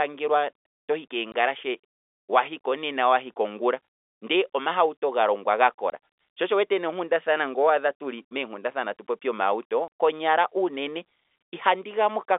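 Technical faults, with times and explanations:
1.32 s, 5.9 s and 9.88 s, packet loss filled with silence: brief dropouts of 20, 20 and 40 ms, the last between "tuli meenkundathana atu popi" and "konyala unene". Missing packets were replaced by silence, which fits one or two 20 ms packets lost each time.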